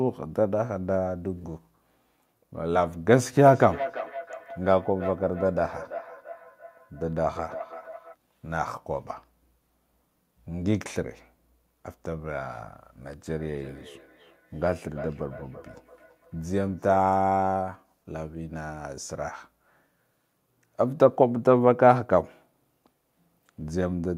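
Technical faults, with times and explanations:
3.45–8.17 s and 13.29–17.03 s, feedback echo between two devices: the speech comes back at a steady interval of roughly 300 ms, thin and ringing, peaking at about −10 dB below the speech in the first stretch and about −19 dB in the second. A second device nearby is replaying this microphone's signal into it, and the local echo canceller only removes its own device's playback.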